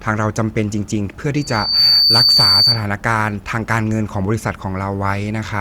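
A speech recording with loudspeaker feedback squeal from 1.36 s to 2.85 s: a microphone is hearing the loudspeaker it drives, and at 4.6 kHz the loop gain passes one, so that tone feeds on itself. It swells over about half a second to roughly 10 dB above the speech. A spectrogram shows a single bright horizontal line at 4.6 kHz, and the waveform's envelope climbs steadily as the steady tone takes over.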